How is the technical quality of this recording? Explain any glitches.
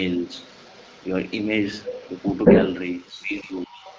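Two call-path faults are audible. A faint echo runs through the whole clip, and the speech is pushed down near the end.

An echo leak is present from 0.02 s to 3.98 s. A delayed copy of the speech trails it by about 192 ms. It sits roughly 15 dB below the main voice. The likely cause is a far-end loudspeaker feeding its microphone. That side's echo canceller did not strip all of it out, so the rest came back down the line.

Speech suppressed in double talk occurs from 3.12 s to 3.85 s, about 0.7 s in all. The voice sinks sharply there, by roughly 35 dB at its lowest. Both sides were most likely talking over each other at that moment. The echo canceller could not tell the talker from the returning echo. It turned everything down together, and the voice went with it.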